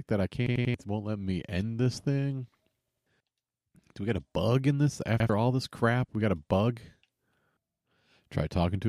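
At 0.46 s, 2.88 s and 5.20 s the speech stutters as a repeated buffer. The same piece of about 93 ms, which fits a 4096-sample buffer, plays again three, two and then one extra time, each repeat joined hard to the last. New audio arrived late each time, so roughly a third, a fifth and a tenth of a second of speech is lost. Unlike a dropout, there is no silence, only identical repeats.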